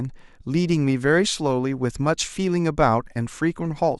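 The clip is speech. Near 3.29 s there is a tiny skip in the sound. This is an overlap between stream segments. Two segments carried time stamps that overlapped, so the player discarded the shared stretch. That material was never actually duplicated. About 17 ms of real audio is lost, and the waveform jumps across the gap. Only one such skip occurs, which fits segments about 6 s long.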